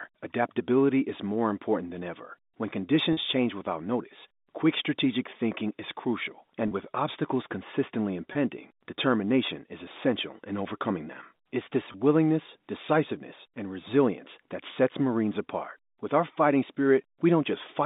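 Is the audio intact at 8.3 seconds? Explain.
No. Between "with obstacles consistently" and "determination is essential in", at 8.33 to 8.35 s, 20 ms of packets were lost, which suggests two packets. The receiver covered the gap by repeating the last pitch period, so the sound briefly holds with a slightly buzzy tone.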